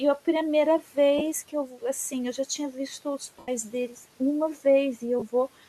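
Lost LE Audio frames at 1.18–1.21 s, 3.39–3.48 s and 5.19–5.23 s: the LC3 decoder repeats the last spectrum with scrambled signs, so the speech briefly turns into a noisy smear. The 90 ms gap fades, which fits a run of 7.5 ms frames.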